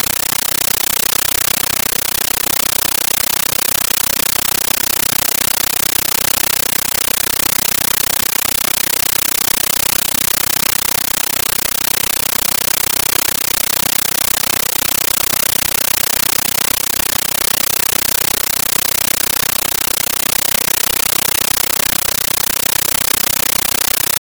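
Speech clip, but the whole thing is a compressed stream played as audio: undecoded AC-3 bursts of 13.3 ms at 31.25 Hz, giving loud chattering static throughout.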